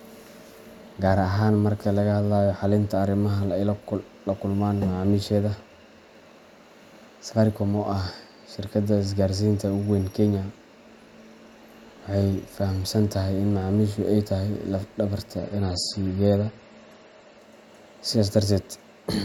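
At 15.38 s the speech drops in quality without a gap. This is an adaptive stream at a lower bitrate. The sound turns thin and swirly, with nothing above 12.5 kHz, which fits a switch from 128 to 32 kbit/s MP3. Full quality returns at 17.38 s.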